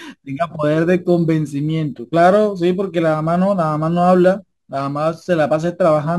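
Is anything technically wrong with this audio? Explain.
Yes. Crude rate conversion runs throughout the whole clip. The sample rate was raised by a small ratio, consistent with a 44.1 kHz to 48 kHz change, by simply repeating the nearest existing sample instead of filtering. Those repeats fall in a regular pattern set by the two rates, producing shifted, inharmonic copies of the speech, sitting roughly 30 dB below it. They come through as a gritty, inharmonic fizz riding on the louder and brighter parts of the speech.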